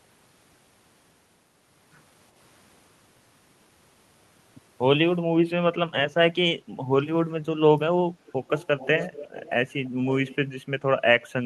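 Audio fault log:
8.26–9.50 s, 9.85–9.89 s, 10.13–10.36 s: echo leak, a faint repeat of the speech 401 ms late, about 15–35 dB down; a single distinct lag rather than reverberant smear, likely a far-end echo canceller's leftover.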